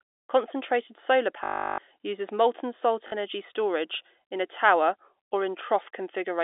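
At 1.44 s the speech hits packet loss with last packet repeated: for 340 ms the receiver keeps replaying the last packet, which fits 20 ms packets, so you get a 50 Hz robotic buzz. A brief 40 ms stutter follows at 3.08 s, over the narrow telephone band.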